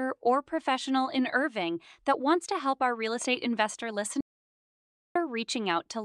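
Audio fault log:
4.21–5.15 s: audio dropout to silence, right after "our real estate investor"; the input likely cut out, leaving about 0.95 s of dead silence without room tone.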